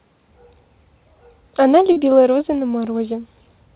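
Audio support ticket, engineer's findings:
Short concealed packet loss, 1.92 to 1.98 s: brief smear or wobble. Receiver's loss concealment likely patched about 40 ms of missing packets by stretching the preceding sound, then crossfaded back into real audio. Any short consonant there could be gone.

Call path itself is fine. Top end stops at 4 kHz, which fits narrowband G.711 mu-law at 64 kbps. That's the normal telephone band, so no action needed there.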